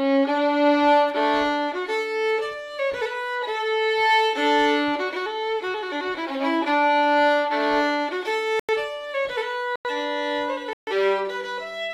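Corrupt frame muted at 8.60–8.74 s, 9.76–9.90 s and 10.73–10.92 s: damaged compressed frames were rejected and replaced with silence, so the audio drops out abruptly for about 145, 145 and 190 ms, with timing kept. Waveform and spectrogram show sharp-edged blank gaps.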